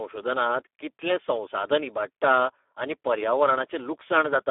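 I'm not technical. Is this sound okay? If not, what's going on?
No. The speech went through the Speex codec, an older internet-call compressor, at a very low quality setting, from start to finish. It sounds hoarse and noisy, like an old phone line, with nothing above 3.7 kHz, so it is dull and muffled.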